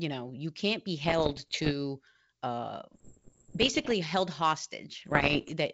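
Bits flipped on an ADPCM link, at a rate of roughly one percent, from 1.04 to 1.73 s just after "know you can't be", from 2.93 to 3.92 s, and from 5.00 to 5.53 s, where the rate climbs nearer one and a half percent. Each wrong bit knocks the decoder's step size and predictor off track, so the error rings on for some milliseconds. The sound breaks into pops and rough bursts with sudden brief jumps in level, against the G.722 wideband coding carrying the rest.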